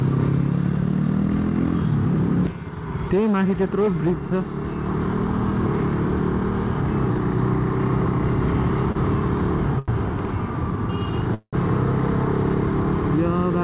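Short stalls from a late packet occur at 8.92 s and 9.79 to 9.90 s. The jitter buffer emptied, so the last sound is held for 28 ms, then 88 ms, before resuming with nothing lost. A call audio freeze follows at 11.34 to 11.55 s, likely caused by packets delayed in transit. The sound stretches into a fading buzz or hiss, falls silent for 50 ms, then resumes where it stopped, 185 ms late. Throughout, nothing is heard above 4 kHz, which fits a narrowband G.711 call path.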